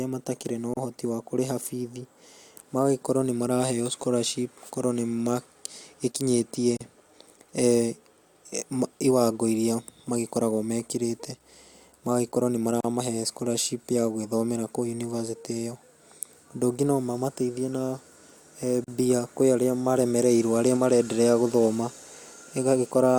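Gaps at a join of encoded pieces at 0.74 s (after "matakĩrĩ na"), 6.77, 12.81 and 18.84 s cut this speech with 32 to 37 ms silences every 6 s, where separately encoded pieces keep their encoder delay and end padding untrimmed.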